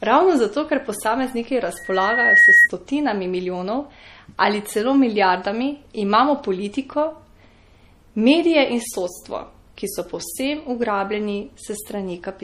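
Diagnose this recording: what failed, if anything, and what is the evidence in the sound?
Codec stage. The speech sounds watery and swirly throughout, with nothing above 15.3 kHz. This is likely MP3 compression at a low bitrate, near 40 kbps.

Analogue, acoustic path. A loudspeaker feedback squeal runs from 1.77 to 2.69 s. A 1.9 kHz tone swells over roughly 0.7 s to about 10 dB above the speech. The microphone hears its own loudspeaker, and loop gain exceeds one at that frequency.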